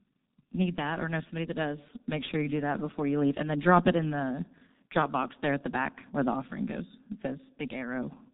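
From start to finish the speech carries heavy G.723.1 codec damage. Nothing survives above about 3.8 kHz, and the coarse, slowly updated voice model blurs consonants into a muffled, hoarse sound, consistent with this codec's higher-rate mode near 6.3 kbit/s.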